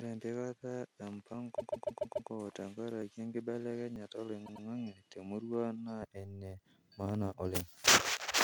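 The speech from the start to 6.03 s has a narrower, duller band and a new noise floor about 45 dB below the signal. At 6.03 s the sound opens up again with no gap and no level change. The likely cause is an input switched to a poorer device. Small jumps ahead land at 1.34, 3.02 and 3.96 s. Roughly 40 ms is lost at the first, and about 20 ms at each of the others. These are likely dropped buffers from an overrun. Repeated frames cause two stutters. From 1.57 to 2.29 s, one 144 ms block plays five extra times, adding 720 ms. From 4.45 to 4.65 s, a 96 ms block plays twice more, adding 192 ms.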